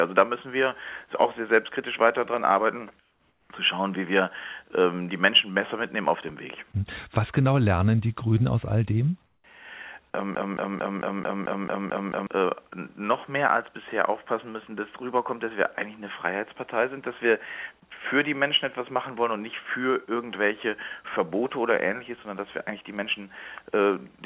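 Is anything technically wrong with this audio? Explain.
Yes. From 3.0 to 3.5 s and from 9.26 to 9.44 s, the sender likely stopped transmitting during pauses, so the receiver's comfort noise replaced the real background: a flat, featureless hiss, about 4 dB and about 7 dB quieter respectively.

From 10.35 to 12.27 s, a broken-record loop occurs: the stream likely stalled and kept replaying its last 0.22 s fragment, repeated back to back nine times, losing the audio meant for that stretch.

The call path sounds consistent with G.711 A-law, with nothing above 4 kHz.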